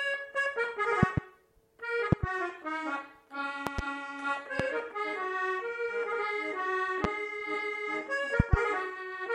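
Loud pops occur at 1.03–1.20, 2.12–2.26, 3.67–3.81, 4.60–4.62, 7.04–7.07 and 8.40–8.56 s. Four are double pops and two are single. Each peaks roughly 20–25 dB above the sound, which carries on underneath. They are likely caused by voltage pulses from a switch, plug or driver glitch.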